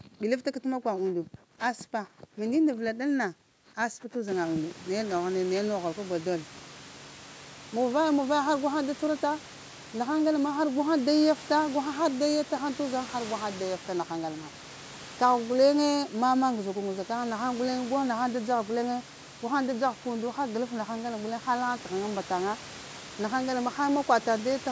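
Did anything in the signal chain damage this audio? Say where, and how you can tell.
No, the signal chain left this speech intact: the band stops at 8 kHz as expected from call microphone processing, and the room noise that rises by about 23 dB a few seconds in belongs to the recording space and stays about 21 dB below the speech.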